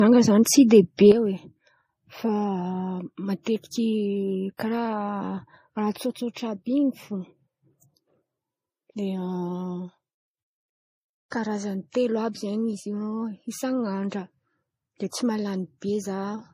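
From the start, the speech has a hard ceiling at 15.1 kHz and a smeared, swirly texture layered over crunchy pre-echo. This is likely transcoding between lossy codecs. The artefacts fit an MP3 pass near 40 kbit/s re-encoded as Vorbis near 39 kbit/s, each adding its own damage.

At 1.12 s, just after "zen̈y tsy de", there is a sudden gain jump. The speech and its background noise drop together by about 9 dB in one step, with no fade. They stay at that lower level to the end. The likely cause is a digital gain change applied without a ramp.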